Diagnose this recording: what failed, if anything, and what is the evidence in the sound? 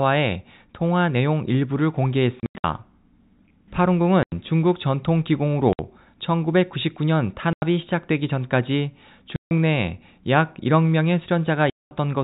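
The network stage failed: packet loss filled with silence. The speech drops out to dead silence at 2.40–2.64 s (about 180 ms lost in scattered gaps, longest 90 ms), 4.23–4.32 s, 5.73–5.79 s, 7.53–7.62 s, 9.36–9.51 s and 11.70–11.91 s. Every gap is a multiple of 30 ms, which fits 30 ms packets. The receiver substituted zeros for the missing packets instead of concealing them. The G.711 telephone band is intact around these gaps.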